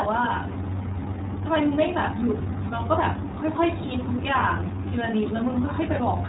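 Throughout the speech, the iLBC codec is at work, and its damage is plainly audible. Nothing above 3.8 kHz survives, so the sound is narrowband and dull at the top. The codec codes each frame's excitation on its own, with no help from the frame before. That leaves the speech clear but rough and slightly synthetic. It runs in the 30 ms frame mode at about 13.33 kbps.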